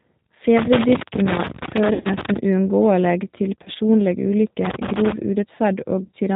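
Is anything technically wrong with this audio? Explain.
Yes. There are three distinct problems: a low-rate speech codec across the whole clip, two stretches of connector crackle, and three dropouts patched over by the codec.

The G.729 codec, apparently the G.729A variant, shapes the entire recording. Its bandwidth and character fit an 8 kbit/s stream. The codec doesn't send the waveform. It rebuilds speech from a vocal-tract filter, a pitch predictor and a few pulses per frame, and it discards everything above 4 kHz. The damage is plainly audible here. The speech sounds band-limited, slightly rough and synthetic.

Loose connector crackle runs from 0.58 to 2.37 s and again from 4.65 to 5.12 s. A worn or dirty contact is making and breaking as it moves, chopping the signal on and off, and any DC on the line turns each break into a pop. The result is an irregular burst of scratchy crackle over the speech for nearly two seconds, then a shorter half-second patch.

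VoIP packet loss concealed by the speech codec appears at 1.93 to 2.08 s, 3.63 to 3.70 s and 6.01 to 6.12 s. The first gap is about 110 ms of missing audio scattered over 120 ms, with its longest run 70 ms. It falls inside the first crackle stretch. The second is about 30 ms. The third is about 80 ms over 120 ms, with runs up to 30 ms. At each gap the decoder extends its last pitch and filter at falling gain, producing a buzzy or coloured, fading sound. Because each frame depends on the previous one, the speech stays weak or distorted briefly after real audio resumes.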